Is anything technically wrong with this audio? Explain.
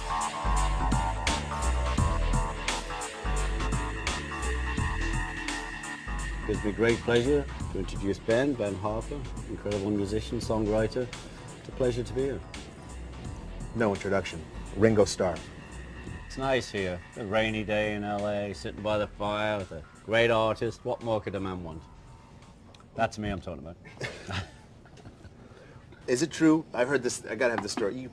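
No, nothing technically wrong stood out on listening to this audio.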